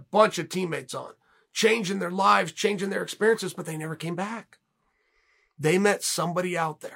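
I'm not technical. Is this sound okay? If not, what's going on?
No. From 0.15 s to 6.89 s, faint ticks run under the speech, about fourteen per second, so they blur into a soft rattle. These are clock slip clicks. Two devices likely kept slightly different time, so single samples kept getting dropped or repeated.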